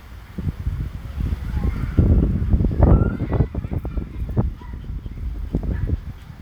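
At 1.26 s and again at 3.71 s the sound jumps forward, as if a short slice of about a twentieth of a second has gone missing, with the two sides butted straight together and no gap of silence. That's the classic audio missing between chunks pattern. The two skips sit roughly 2.5 s apart, so the likely cause is a recorder or processor handling the audio in 2.5 s blocks and dropping a bit each time it switches blocks.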